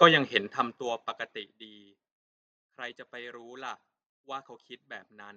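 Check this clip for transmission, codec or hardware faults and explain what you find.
One fault stands out: zipper noise from 0.34 to 1.71 s. Here the speech is turned down by roughly 20 dB, but the gain moves in hard 1 dB steps, about twenty times a second, instead of gliding. Each abrupt jump puts a tiny discontinuity in the waveform, heard as a click, so the fade carries a fast ticking, zipping texture on top of the speech until the level settles.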